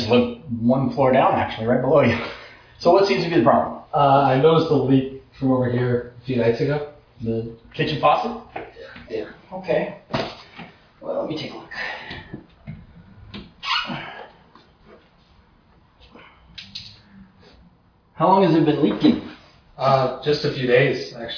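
No technical faults can be heard anywhere in the audio.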